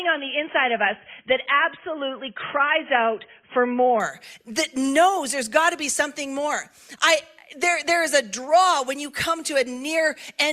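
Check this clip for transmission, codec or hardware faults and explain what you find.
One fault is present. From 0.0 to 4.0 s, an adaptive stream starting at a low bitrate: stronger codec artefacts, nothing above 3.8 kHz, then a sudden gapless improvement, consistent with a 16 to 96 kbit/s step.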